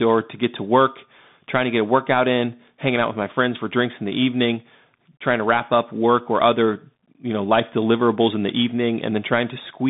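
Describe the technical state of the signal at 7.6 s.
At 7.6 s the speech carries the Bluetooth CVSD headset codec, as it does for the whole clip. The band runs from about 150 Hz to 3.7 kHz, with nothing above 3.8 kHz, which fits a 64 kbps CVSD link. Each sample is a single up-or-down bit, and the step size adapts. Fast, loud high content outruns that step and distorts. S sounds turn scratchy, and a granular hiss sits under the speech. The damage is plainly audible.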